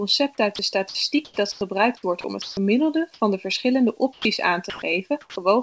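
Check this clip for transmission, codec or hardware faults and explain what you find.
Three kinds of voice-detector fault are audible in this speech clip, all typical of a sender running discontinuous transmission over a wideband call path that carries nothing above 8 kHz.

Sound dropped by the voice detector happens six times: at 0.56 s (30 ms), 0.89 to 0.95 s, 1.52 to 1.61 s, 4.13 to 4.25 s, 4.70 to 4.82 s and 5.21 to 5.36 s. The sender likely judged quiet stretches of speech to be background and stopped transmitting. The receiver filled each gap with comfort noise, so between 30 and 100 ms of speech vanishes each time. Steady noise or near silence takes its place until the detector reopens.

Comfort noise in place of the background runs from 1.25 to 1.61 s. The transmitter likely went silent during a pause, sending only occasional noise descriptions. The receiver synthesised a stand-in from those descriptions for about 210 ms of that span. 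The real room sound, with its texture, is swapped for a smooth, characterless noise bed, and the last part of this stretch coincides with the dropout at 1.52 s.

Sound chopped by the voice detector covers 1.97 to 2.57 s. Here the detector likely flipped between sending and muting several times, and about 240 ms of the 600 ms window was replaced with comfort noise. The speech has two or more holes through this stretch.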